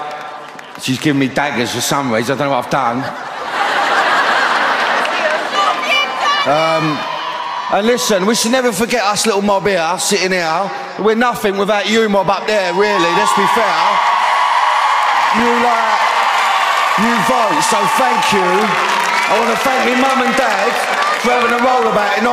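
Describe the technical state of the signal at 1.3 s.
Nothing at 1.3 s points to a technical fault; the signal is intact at that moment.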